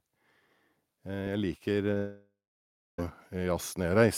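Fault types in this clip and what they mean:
Automatic gain rising: From about 1.03 s to the end of the clip the level climbs steadily, with voice and background noise swelling together, as the gain control reacts to input it judges too quiet. Unlike a speaker moving closer, the noise floor rises in step with the speech. Unlike a fade-in from an edit, it is a slow, continuous lift that keeps going across the dropout and for the rest of the speech.
Short concealed packet loss: Two brief gaps follow one another, a 10 ms hole at about 1.91 s and a roughly 30 ms one from 1.93 to 1.97 s. The receiver bridged each by extending the sound just before it, so they come through as a quick smear or wobble rather than silence. What sets them apart from a long dropout is that they last only hundredths of a second.
Long network dropout: Right after those two gaps, from about 1.97 to 2.99 s, roughly a second of audio is missing. 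The receiver first stretches the last sound into a fading buzz or hiss, then leaves about 620 ms of near-silence before the speech returns, with that stretch lost rather than delayed. The cause is likely the network connection stalling. A deliberate pause in speech would not begin with a decaying, artificial tail like this.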